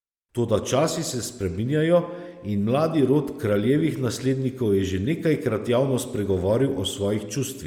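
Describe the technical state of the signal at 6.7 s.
At 6.7 s you're hearing Bluetooth LC3 compression, which runs through the whole clip. The speech has a plainly audible breathy, grainy edge, likely from a transform codec filling its upper spectrum with noise, which fits roughly 48 kbps and 10 ms frames.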